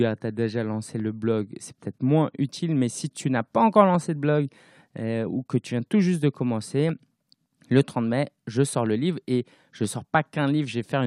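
Right after "tu as déjà lancé", around 1.0 s, a click starts ticking through the speech and keeps coming back roughly every 0.98 s until about 10.8 s, so around ten of them. That steady spacing points to clock drift buffer slips: the likely cause is two devices on separate clocks drifting apart by a few hundred ppm, so the buffer between them overflows or runs dry and a handful of samples, somewhere around fifteen, get dropped or doubled each time.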